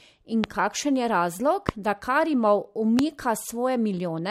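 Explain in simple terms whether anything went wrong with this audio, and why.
Three loud pops interrupt the speech: one at 0.44 to 0.46 s, just before "kakšen je razlog da", one at 1.69 to 1.71 s, right after "kakšen je razlog", and one at 2.99 to 3.01 s. Each is a single sharp click, far louder than the speech, while the speech continues underneath. A loud pop comes from a sudden electrical jolt entering the signal, likely from a bad connection, a switch, static or a glitch in the recording hardware.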